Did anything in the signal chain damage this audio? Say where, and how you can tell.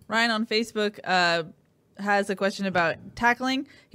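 Yes. There's a single loud pop at 2.78 s, a sharp click that jumps something like 15 dB above the speech, with the talking carrying on straight through it. That points to a voltage spike entering the analogue wiring, likely a plug, switch or static discharge.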